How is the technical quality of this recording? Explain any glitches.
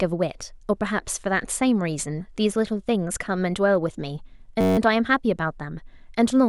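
There's one clear glitch, a system hang loop from 4.61 to 4.78 s. For that stretch the playback froze while the sound hardware kept replaying the same ring buffer, so a 10.67 ms slice of the speech repeats exactly 16 times, which fits a 512-sample buffer. Because the slice is so short, it comes across as a steady buzz at about 93.8 Hz rather than a stutter, and essentially no audio is lost.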